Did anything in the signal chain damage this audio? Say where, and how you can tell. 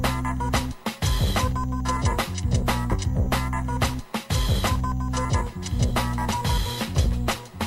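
Yes. A stream segment skipped at about 2.91 to 2.96 s, in the network and playback stage: the sound jumps abruptly forward with a brief blip, and the material that should bridge that point is missing. The likely cause is a segment that failed to load, so the player moved on to the next one.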